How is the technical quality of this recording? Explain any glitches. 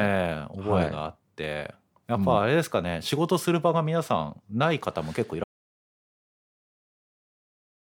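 The recording has one clear glitch, an audio dropout to silence. At 5.44 s the speech cuts off mid-flow into silence, with no room tone, lasting to the end. The input was likely lost, so the recorder kept writing silence.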